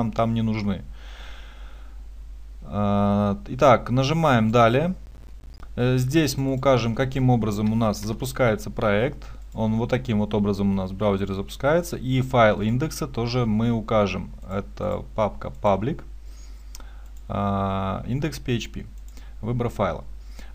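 From 5.06 to 5.62 s there's a burst of processor overload crackle. The system couldn't finish its short buffers, around 10 ms each, on time, so about 20 came out as little silent gaps. Their hard edges stack into a gritty tearing over the sound.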